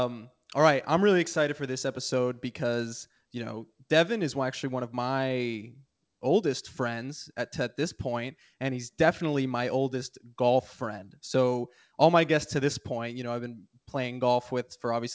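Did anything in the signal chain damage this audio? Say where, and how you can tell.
No, nothing in the signal chain damaged this speech.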